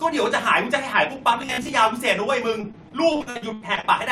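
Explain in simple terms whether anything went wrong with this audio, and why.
Two problems can be heard. From 1.42 to 1.73 s the speech turns into a rigid, metallic buzz around 67 Hz: robotic sound from repeated short buffers. Roughly half of this stretch is a re-played snippet, likely a roughly 15 ms buffer being repeated because fresh audio arrived too slowly, so the repetition forces that fixed pitch.

From 2.61 to 3.85 s there is repeated packet loss (robotic sound). About a dozen brief holes, the longest about 79 ms, are each patched by stretching the previous sound. Around 29% of that stretch is filled-in rather than real audio, so it sounds choppy and robotic.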